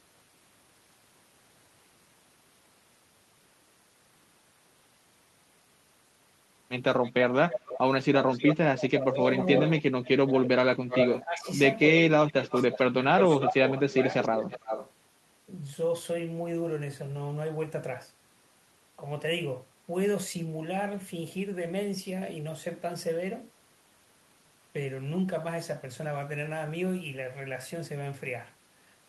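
Speech, with two overlapping problems in the middle of the clip. From 7.03 to 10.32 s, and again from 10.91 to 14.91 s, an echo leak is heard. A delayed copy of the speech trails it by 302 ms in the first stretch and 324 ms in the second. It is only a little quieter than the original. This is likely a far-end loudspeaker feeding its microphone, with the echo canceller failing to remove it. Speech suppressed in double talk overlaps both stretches. From 8.68 to 9.19 s the speech dips sharply. From 9.81 to 14.16 s it drops out deeper, on and off, for roughly two seconds in all. Both dips overlap the echo stretches. The likely cause is the echo canceller mistaking the talker for echo and turning both down.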